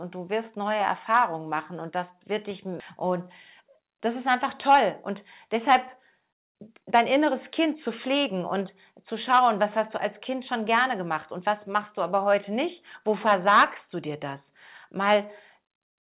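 It's a speech clip that came through a narrowband call path, with nothing above 4 kHz, which fits G.711 mu-law at 64 kbps. At 2.8 s, right after "und das wird dich", there's a skip ahead: about a second and a half of audio just isn't there, and playback jumps straight to later material with no gap or fill. That's what you get when a chunk is lost in transit or thrown out by an overflowing jitter buffer while newer audio was already queued up. Right after that the receiver is clearly trying to shed the built-up delay, because you get jitter buffer speed-up in three stretches. From 3.60 to 5.13 s it runs at about 107%, trimming roughly a tenth of a second. From 5.55 to 9.88 s, ending just before "du als", it's at about 112% and drops around half a second, so that's where it sounds most hurried. From 10.29 to 12.66 s, after "du als", it's at about 106%, losing something like 150 ms. The way it works is the buffer cuts out tiny pitch-period-sized slivers over and over, so the pitch stays put but everything comes out faster.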